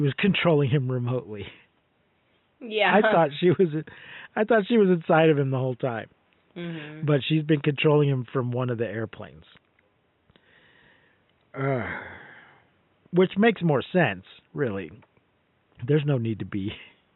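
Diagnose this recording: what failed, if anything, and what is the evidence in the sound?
Nothing failed; room noise sits about 47 dB below speech.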